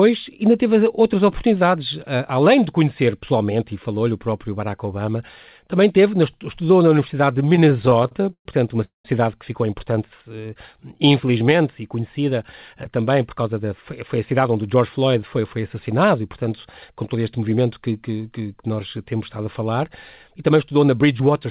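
From 7.56 to 8.46 s there's a run of repeated stalls (stutter). Packets kept turning up late, so the jitter buffer ran dry 16 times. The receiver stretched the last sound across each gap, the longest being 121 ms, for about 304 ms of filler in total. Nothing is lost, but that stretch drags and hiccups.

At 8.84 s the sound freezes for about 202 ms. It holds briefly and then drops to roughly 140 ms of silence before carrying on where it left off. This is likely a call audio freeze, where packets were held up in transit and the buffer emptied completely.

Between 10.09 and 11.62 s, right after "que ficou importante" and ending before "e conhecida eh também", there's a jitter buffer slow-down. The receiver repeated single pitch periods to rebuild its reserve, adding 144 ms. The result is 91% speed at unchanged pitch, so sounds come out drawn-out.

There are two jitter buffer speed-ups, each trimming short pitch-period slices to shed excess delay. 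The first runs from 14.17 to 15.75 s, before "e portanto com todo". It removes about a tenth of a second and runs at 107%. The second runs from 20.28 to 21.20 s, after "temos estado a falar". It removes around 70 ms and runs at 108%. Both sound rushed at the same pitch. Underneath all of this, nothing sits above 4 kHz, which fits a G.711 mu-law call path.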